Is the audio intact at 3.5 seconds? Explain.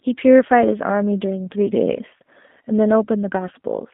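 No. G.729 codec damage runs through the whole clip, including 3.5 s. Band-limited to about 200 Hz–3.6 kHz, speech sounds rough and synthetic, which fits 8 kbit/s pulse-based rebuilding.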